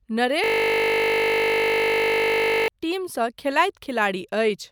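A speech clip with a system hang loop from 0.44 to 2.68 s. The host or driver stalled while the audio hardware kept replaying the same 20 ms ring buffer over a hundred times, so the sound becomes a steady 50 Hz buzz.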